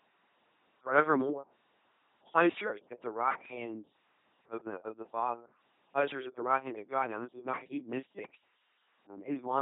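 The whole speech clip passes through an LPC-10 vocoder at 2.4 kbit/s, and the damage is heavy. Each moment is rebuilt as either a pulse-driven buzz or filtered noise. The result sounds mechanical and robotic. Wrong voicing calls add stray buzz or hiss. Nothing remains above 3.8 kHz.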